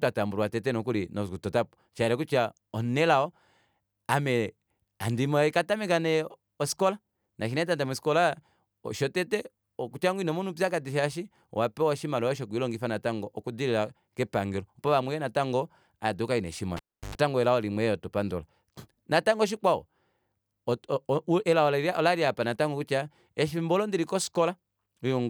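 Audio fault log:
16.77–17.15 s, cable pulled and plugged in: the speech is cut by a sharp pop as the live cable leaves its socket, followed by about 334 ms of near silence while the connection is open. As the plug goes back in, the tip touches before the shield does, so roughly 97 ms of 50 Hz mains buzz leaks through the ungrounded contact. A second pop marks full reconnection, and the speech resumes with "elao limwe yoo hatu".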